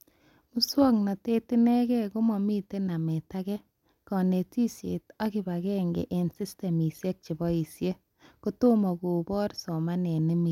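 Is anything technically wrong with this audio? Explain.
No, the signal shows no technical faults that a listener can hear.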